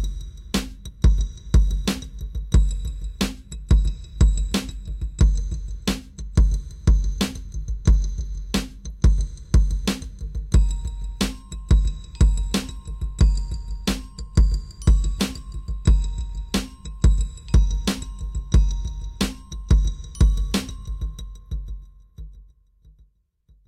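At 7.95 s there's a single sharp click, and it's almost certainly dropped samples. Only a fifth of a millisecond or so seems to go missing, so the waveform jumps straight from one value to a later one instead of moving smoothly between them. That gap is far too brief to take anything audible out of the sound; what you get is the step itself, a crisp tick, and it would show as a thin vertical line on a spectrogram.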